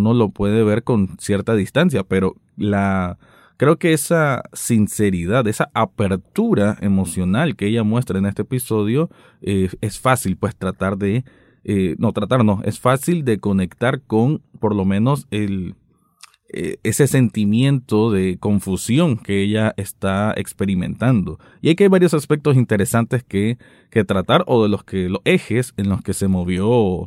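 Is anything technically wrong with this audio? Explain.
No, nothing technically wrong stood out on listening to this speech recording.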